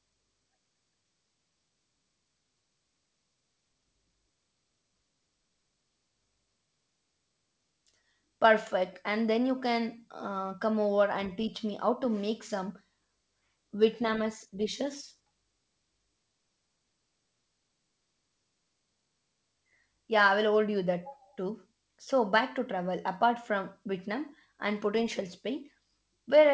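No technical faults are audible anywhere here.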